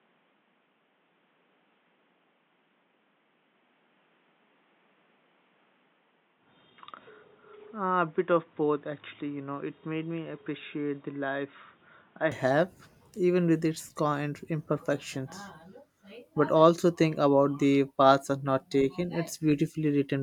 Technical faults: input switched to a poorer device

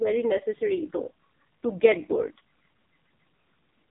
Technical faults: AMR narrowband mobile codec

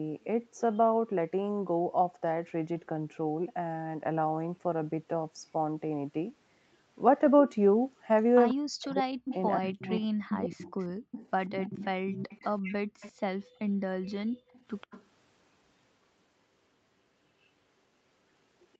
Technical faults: echo leak; speech suppressed in double talk; background gated by the echo canceller

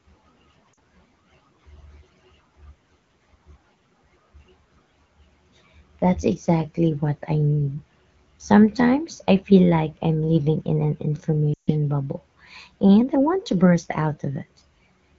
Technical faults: lost AMR speech frames

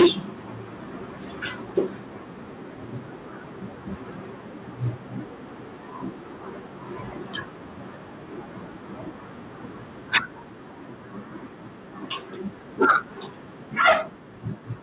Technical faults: microphone overload; microphone volume stepped down

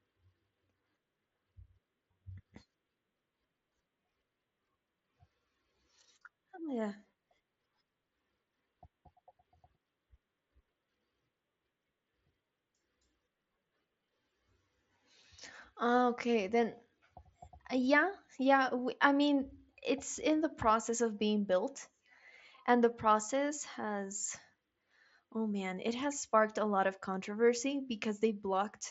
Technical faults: unconcealed Bluetooth headset packet loss

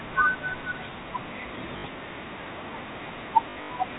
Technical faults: packet loss with last packet repeated

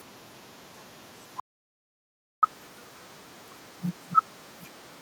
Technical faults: playback stall; catch-up at higher speed

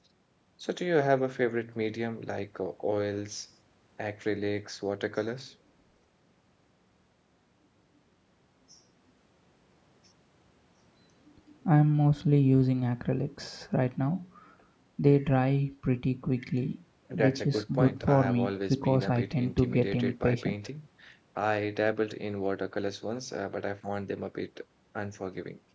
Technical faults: none

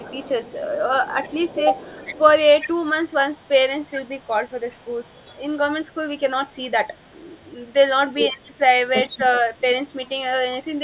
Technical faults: echo leak; speech suppressed in double talk

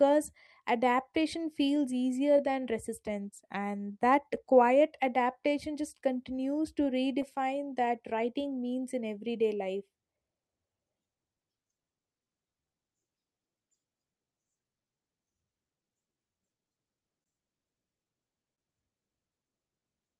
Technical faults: clock drift between sender and receiver; repeated timing corrections; scattered short gaps; repeated stalls (stutter); short stall from a late packet

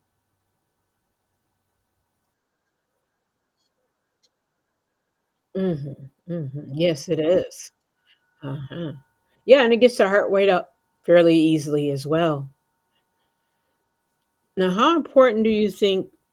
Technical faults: none

